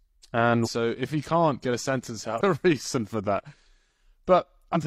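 At 0.62–0.69 s, just before "if he can't get", at 2.37–2.41 s after "can't get a sentence", and at 4.72–4.77 s, damaged data in the compressed stream throws the decoder off its frames. Each event is a brief disruption, seen as a broadband vertical smear and an abrupt break in the waveform.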